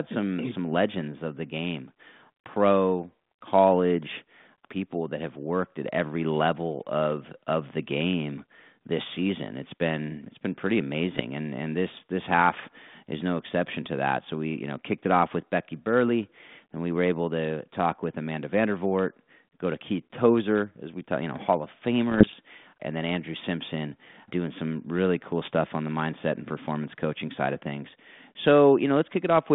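At 11.14 s a short, rough burst cuts into the speech and lasts until 11.23 s. A second, longer one runs from 22.09 to 22.35 s. These are bit errors on an ADPCM link, at a rate of roughly a third of a percent. Each flipped bit throws off the decoder's step size and predictor, so the damage smears on for some milliseconds. It sounds like pops and grating noise, with brief jumps in level. The band is narrow, near telephone width, which fits G.726 ADPCM at 32 kbit/s.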